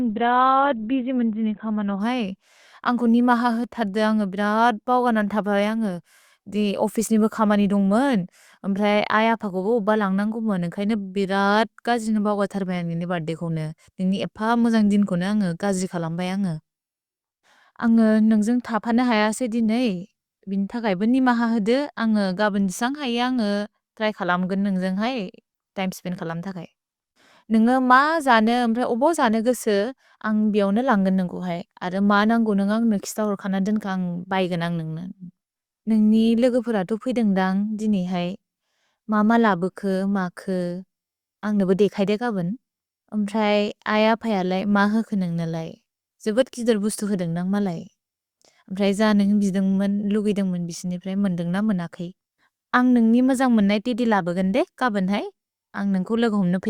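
From 0 to 2.0 s the speech sounds dull and smeared, with nothing above 4.2 kHz: an adaptive stream starting at a low bitrate, fitting a 12 kbit/s Opus start. At 2.0 s quality jumps without a gap, consistent with 64 kbit/s. A spectrogram shows the flat ceiling suddenly lifting.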